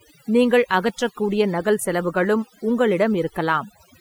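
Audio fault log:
Throughout, overdone noise removal: a noise reduction stage was driven far too hard on a noisy speech recording, cutting individual frequency bands down or out whenever they sat close to its noise estimate, and the quieter parts of the voice fell below that line along with the noise. The background drops and breaks up into twinkling, chirping specks where stray bands flicker on and off.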